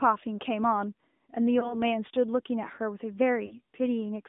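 The whole clip has gone through an AMR narrowband mobile codec, so the speech is boxed into roughly 200 Hz to 3.6 kHz and sounds plainly buzzy and synthetic, which fits a mid-rate mode around 10 kbps. From 1.60 to 1.83 s there's a lost AMR speech frame: a short dip and warble, probably a single frame. The decoder papers over it by repeating the last pitch and vocal tract settings. Then from 3.46 to 3.55 s a longer gap, likely two frames, gets stretched out and fades before the speech returns a bit rough.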